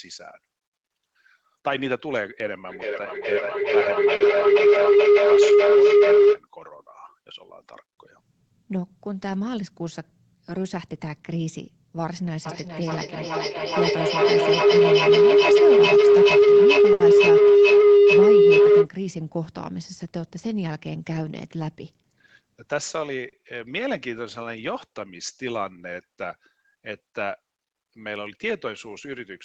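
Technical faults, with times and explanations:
2.69–6.44 s and 12.46–18.92 s, feedback howl: Both times a tone of roughly 400 Hz swells up out of the speech and peaks about 13 dB louder than the talker, pulsing roughly every 0.4 s. That's two devices in the same room on one call, with the mic picking up the other speaker and sending it round again with a bit more gain each trip. The pulse rate is the loop's round-trip delay, and the pitch is the frequency the loop favours.
4.15–4.23 s, 16.93–17.03 s and 23.29–23.36 s, short stall from a late packet: Each time a sound hangs on a touch too long, about 50 ms, 70 ms and 40 ms respectively, with a faint buzz or dip. The first one falls inside the first howl. A packet showed up late, the jitter buffer ran dry, and the receiver stretched the last bit of audio until the packet arrived. Nothing is actually lost; the speech just picks up again from where it paused, now that much later.
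9.62–9.99 s and 21.55–22.50 s, jitter buffer speed-up: The speech briefly rushes without any shift in pitch, running at about 113% speed in the first stretch and about 107% in the second, with roughly 50 ms and 70 ms trimmed out. Each one follows a stall and claws back the delay that stall added. The receiver drops tiny pitch-period slices one after another, so the speech sounds hurried rather than chipmunky.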